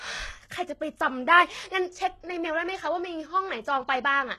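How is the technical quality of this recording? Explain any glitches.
The recording is held back by audible low-bitrate compression across the whole clip. Sibilants sound gritty and lispy, with a metallic sheen on the upper frequencies. This is likely HE-AAC compression at a very low rate, consistent with about 16 kbps, where only the lower spectrum is properly coded. The treble is rebuilt by copying lower bands upward, so its harmonics fail to align with the real ones. On a spectrogram the top band looks repetitive and smeared, and everything above 12.3 kHz is empty.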